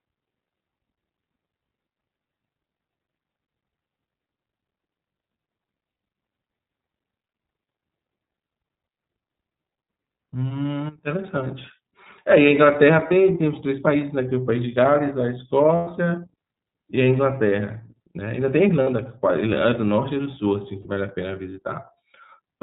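Speech coded throughout with the iLBC codec: nothing passes above 4 kHz, and a plainly audible rough, synthetic edge fits iLBC's 30 ms frame mode at about 13.3 kbps. Lost iLBC frames produce short held, slightly buzzy vowel-like fills at 5.90 s (90 ms), 7.46, 13.08, 18.84 and 20.81 s (30 ms each), and 15.75 s (120 ms). In each case the decoder repeats the last pitch cycle with noise, and the speech recovers almost at once.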